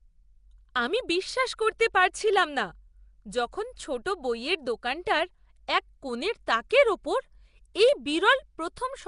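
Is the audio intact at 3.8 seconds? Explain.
No, the whole clip carries what is likely Nellymoser compression: coarse block coding leaves rough, hissy, underwater-sounding speech, and a spectrogram shows noise-filled bands with nothing above 10.6 kHz.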